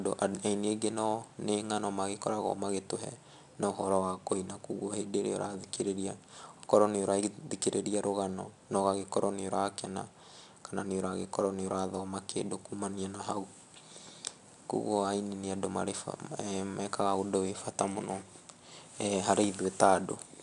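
A speech recording with 4-bit ADPCM compression running the whole way through, and it's plainly audible. Each louder stretch picks up a gritty hiss that rises and falls with the level, and sharp onsets get roughed up where the adaptive step can't keep pace. Nothing comes through above about 10.7 kHz, so the top end sounds dull, which fits a low sample rate of around 22 kHz and a stream of roughly 89 kbps.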